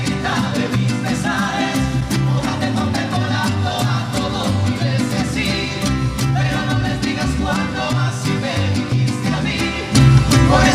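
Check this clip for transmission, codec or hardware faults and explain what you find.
One fault shows up: a sudden gain jump near the end. From 9.95 s to the end, the level steps up by about 7 dB in a single sample, likely from a digital gain setting applied without a ramp. Sound and background noise rise together, so the waveform envelope widens abruptly and the spectrogram brightens uniformly across all frequencies at that instant.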